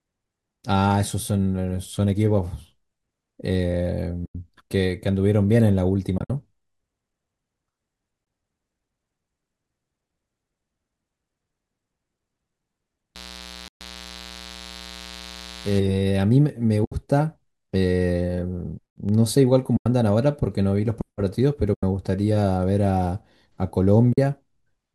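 Soft-edged gaps, fading out and back in, open at 4.26–4.35 s, 6.18–6.30 s (broken holes, longest around 70 ms), 8.25–8.27 s, 13.68–13.80 s, 16.85–16.92 s, 19.77–19.86 s, 21.74–21.83 s and 24.13–24.18 s. This is AAC frame loss with muting. The decoder zeroed the missing frames, and their overlapping windows blur the edges. The gaps run from 20 to 130 ms in steps of about 10 ms, which fits the short frames of a low-delay AAC stream, likely AAC-ELD.

From 13.15 to 15.79 s a steady, raspy mains buzz sits about 20 dB below the speech. It comes from switching spikes on 60 Hz power, with harmonics climbing into the kilohertz range.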